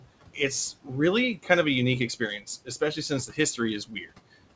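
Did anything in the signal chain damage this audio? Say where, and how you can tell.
Yes. The call-processing stage's noise suppressor leaves noise suppressor artifacts throughout. The room noise, about 18 dB below the speech, is pulled down by about 18 dB between phrases and lifts back under them, so the residue pumps frame by frame.

The same suppressor also produces speech cut by the noise suppressor at 2.65–3.11 s, 3.28–3.38 s and 3.87–4.08 s, with drops of about 15, 11 and 14 dB. In each span, roughly a tenth of a second of low-level speech sounds swallowed because the suppressor treated it as noise and attenuated it with the background.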